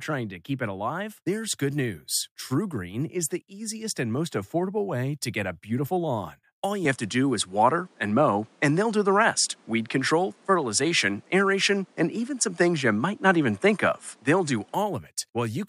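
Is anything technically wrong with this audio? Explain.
Yes. Input likely switched to a poorer device from 6.85 s to 14.74 s. The recording path changes mid-take, so the speech loses everything above 11.4 kHz and turns duller. It shifts level by about 5 dB and gains a faint new noise floor, with no gap at the switch.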